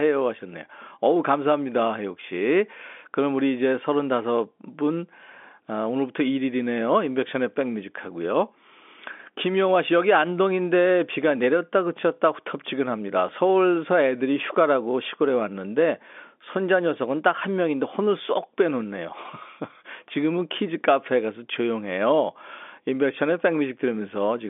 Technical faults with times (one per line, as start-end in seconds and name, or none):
none